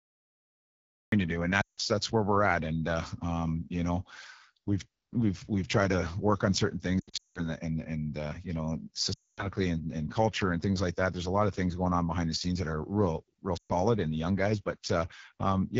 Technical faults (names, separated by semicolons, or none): AMR wideband (HD Voice) codec; cut-off start; lost AMR speech frames